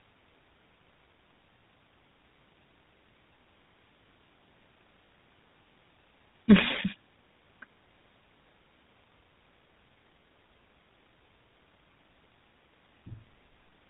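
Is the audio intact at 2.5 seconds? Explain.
No, the speech at 2.5 seconds sounds plainly buzzy and gravelly, with nothing above 4 kHz, as it does throughout. This is GSM full-rate coding, which fits 13 kbps: the codec models the vocal tract and drives it with sparse regular pulses.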